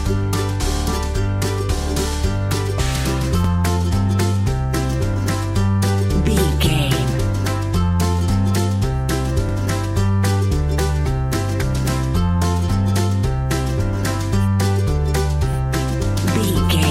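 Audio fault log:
3.44 s, 9.49 s, 15.53 s: overlapping chunks. Each 6 s chunk starts 44 ms early and replays that sliver, so it sounds like a regular stutter rather than a gap.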